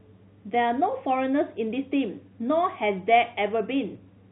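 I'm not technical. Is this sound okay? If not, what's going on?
Yes, nothing is wrong with this recording.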